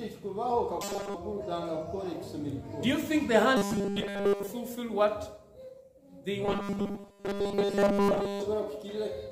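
Robotic sound from repeated short buffers hits the audio at 0.82–1.15 s, 3.57–4.51 s (fully) and 6.46–8.42 s. The buzz sits at 200 Hz, likely from 5 ms buffers looping, and shows as evenly spaced harmonic stripes on a spectrogram.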